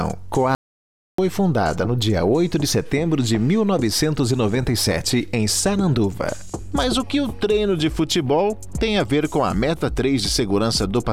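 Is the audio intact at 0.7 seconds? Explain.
No, an audio dropout to silence runs from 0.55 to 1.18 s: the input was likely lost while recording continued, leaving 0.63 s of total silence without room tone.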